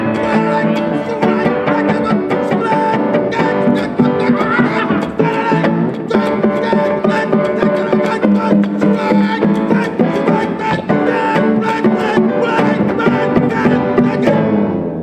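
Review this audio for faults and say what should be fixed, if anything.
Nothing stood out on listening, so there is nothing here that needs fixing.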